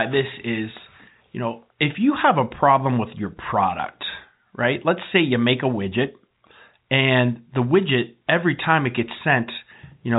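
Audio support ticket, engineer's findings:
No faults found; telephone-band speech, nothing above 3.8 kHz.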